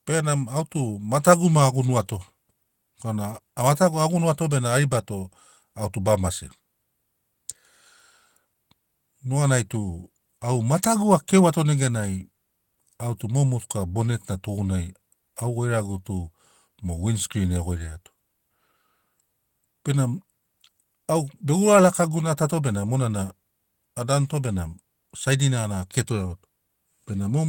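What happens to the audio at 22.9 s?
At 22.9 s the speech continues cleanly, with no dropout, click, distortion or other fault at that moment.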